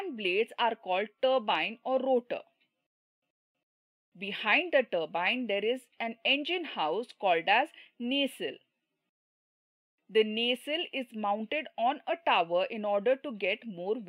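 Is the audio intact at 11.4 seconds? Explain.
Yes, the audio is intact at 11.4 seconds, with no dropout, click, distortion or other fault at that moment.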